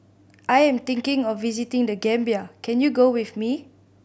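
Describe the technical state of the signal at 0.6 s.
At 0.6 s the speech signal is intact, with no audible technical fault at that moment.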